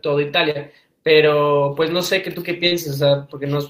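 Speech, with two kinds of network damage. From 1.73 to 2.07 s the sound turns rough and noisy but never breaks: this is a lost packet rebuilt from error correction. About 180 ms arrived only as low-bitrate backup copies carried in the following packets, which fits a run of roughly nine lost packets. Because the decoder had real, if coarse, data, the sound stays continuous and keeps its shape rather than smearing. At 2.67 to 2.73 s there is short concealed packet loss: about 40 ms never arrived at all, so the receiver stretched the preceding sound to cover it, giving a brief smeared wobble instead of the grainy texture of a rebuilt stretch. It runs straight into a second rebuilt section from 2.71 to 2.77 s, where another 40 ms comes back coarse and noisy from backup copies.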